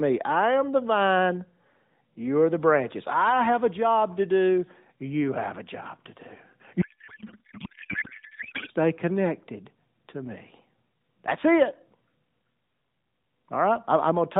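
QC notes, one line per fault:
6.82–8.70 s, codec payload misread: for nearly two seconds the speech turns into garbled, warbling noise that barely tracks the talker. The sender packs AMR frames octet-aligned but the receiver parses them as bandwidth-efficient, so every field lands a few bits off and the decoder synthesises nonsense from misplaced parameters. Sound returns cleanly once the framing agrees again, back to the narrowband mobile codec's band-limited sound with only light coding damage, consistent with roughly a 12.2 kbps mode.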